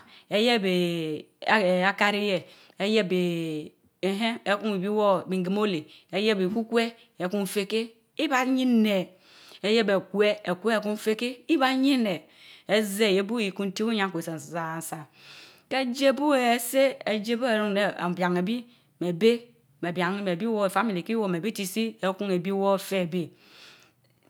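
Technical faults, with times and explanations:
No technical fault can be heard in this speech recording. There is nothing to list with a time or an explanation.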